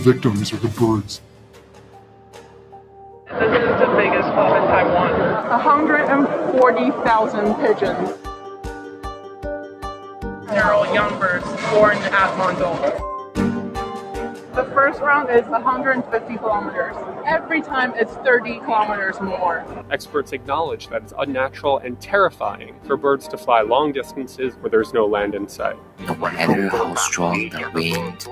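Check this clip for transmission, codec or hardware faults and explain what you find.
Two related faults are present, both from speech-oriented noise suppression acting on non-speech audio.

A noise suppressor applied to music or sounds runs across the whole clip. It treats steady tones, ambience and reverberant tails as noise and turns them down while attacks pass, so the level swings by around 10 dB and the sound pumps, flutters or thins out.

Sound cut by the noise suppressor occurs at 1.18–3.29 s, 8.15–10.49 s, 13.19–23.26 s, 24.04–24.67 s and 25.51–26.01 s. In each stretch, held or decaying material drops by up to about 8 dB and tails end early, while sudden onsets mostly come through.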